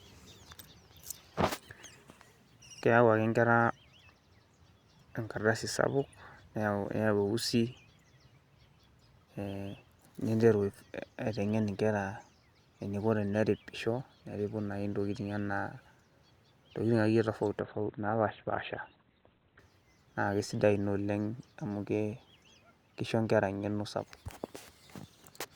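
From 17.59 s to 19.59 s the speech drops abruptly in quality, a sign of an adaptive stream at a lower bitrate: the player swapped to a leaner encoding for two seconds when the connection slowed. Nothing above 4.3 kHz survives, so sibilance dulls and codec artefacts rise, which points to a step from around 64 kbit/s Opus down to about 12 kbit/s. Unlike packet loss, there is no gap or stutter, and full bandwidth returns suddenly rather than gradually.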